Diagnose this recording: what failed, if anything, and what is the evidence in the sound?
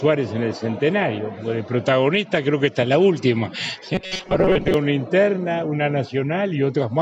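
From 3.95 to 4.74 s the sound goes robotic, with a rigid metallic buzz at 188 Hz. That's robotic sound from repeated short buffers, likely a starved driver or buffer looping about 5.3 ms chunks, with roughly half the audio repeated rather than new.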